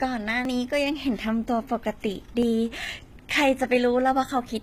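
Speech with a gritty, metallic treble that stops around 14.9 kHz, likely from HE-AAC compression at a bitrate near 20 kbps. Tiny skips of about 15 ms land at 0.45, 1.44, 2.43 and 3.41 s, a steady once-a-second pattern that's likely audio missing between chunks.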